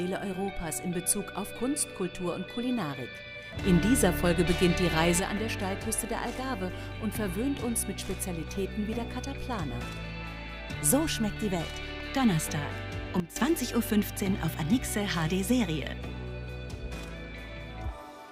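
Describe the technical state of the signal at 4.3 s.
A sudden gain jump is in effect from 3.64 to 5.2 s, likely a digital gain step applied without a ramp, lifting sound and background noise together by about 6 dB.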